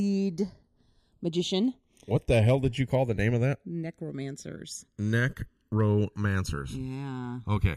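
A speech clip with channels drifting apart for its whole length: the two sides appear to come from devices on separate clocks, roughly 100 ppm apart, so their offset slides to around a millisecond by the end. In mono, comb notches sweep slowly, heard as a gradual flanging.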